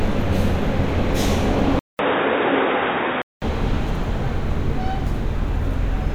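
At 1.79 s the sound cuts out for about 200 ms. It returns dull and boxy, with nothing above 3.8 kHz. The level drops by about five decibels. A faint new background noise sits well below the sound. This is the input switched to a poorer device, likely a change to another microphone or a headset's call profile. The narrower band and different tone persist until 3.42 s, when the fuller sound returns.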